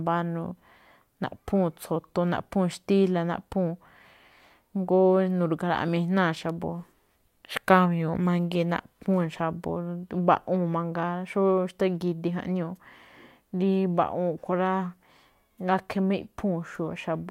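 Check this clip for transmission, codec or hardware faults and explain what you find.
One fault is present in the speech: a bit error spike at 6.50 s. A single flipped bit in a digital word jumps three consecutive samples to about -26 dBFS before they snap back, producing one sharp, broadband tick unrelated to the speech. On a spectrogram it shows as a thin vertical line through all frequencies; on the waveform, a near-instant isolated spike.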